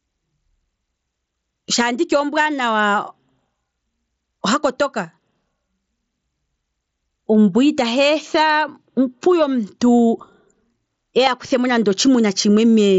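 Throughout the clip the gain swings by roughly 20 dB, leaving loud and soft passages squashed close together. This is gain pumping, likely from the input gain set far too high with a fast limiter dragging it down on each peak.

At 9.98 s and again at 11.26 s there is a barely noticeable glitch, each lasting about 7.5 ms. This is concealed Bluetooth headset packet loss: each gap fits a single lost frame between headset and phone, which the receiver bridged by repeating a closely matching stretch of the preceding waveform. The wideband mSBC link carrying the audio adds only light graininess of its own.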